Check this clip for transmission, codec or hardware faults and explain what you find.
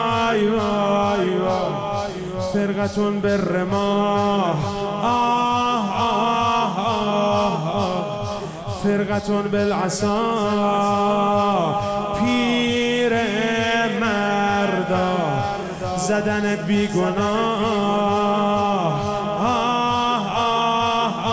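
No transmission, codec or hardware faults can be heard anywhere in the recording, and the signal stays intact and continuous throughout.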